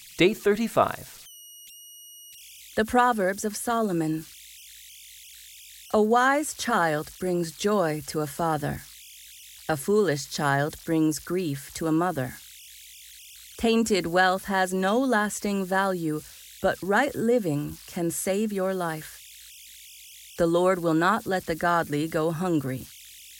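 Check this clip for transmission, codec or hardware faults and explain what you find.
One hardware fault runs through the whole speech clip: converter idle tones. Without dither, the delta-sigma converter settles into repeating bit patterns on low-level input, producing tones around 3 kHz heard as whistles, buzzy chirps or rough hiss in pauses and grainy noise under quiet passages, about 23 dB below the signal.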